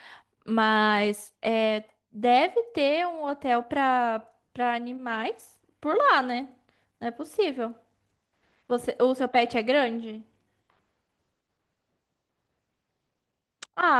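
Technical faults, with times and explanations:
No technical faults found in the speech recording.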